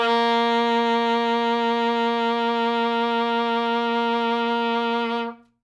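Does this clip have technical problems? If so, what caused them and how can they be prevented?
No, this music clip has no technical problems.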